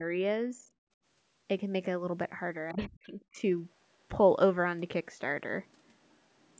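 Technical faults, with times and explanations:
0.0–0.06 s, 0.57–0.69 s and 2.72–3.44 s, speech suppressed in double talk: the speech level sags abruptly and returns, briefly at the first two times and for about half a second at 2.72 s. The dips run from roughly 10 dB to roughly 30 dB, with the longest also the deepest. The likely cause is the echo canceller meeting simultaneous far-end sound, failing to tell this talker from the loudspeaker echo, and pulling both down together.
0.97–1.03 s, background gated by the echo canceller: the room sound drops away by about 29 dB for well under a tenth of a second, leaving a hole between sounds before the ambience snaps back. While the loudspeaker was playing, the canceller clamped the microphone hard to keep echo out, and it took the background with it until it released. The band stops at 8 kHz, which is the call's microphone processing and not part of this fault.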